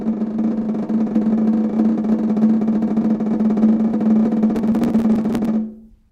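From about 4.56 to 5.45 s the music picks up a burst of processor overload crackle. The machine couldn't keep up with its tiny buffers, well under a millisecond each, and skipped around fifty of them, so hard-edged gaps pile up into gritty tearing.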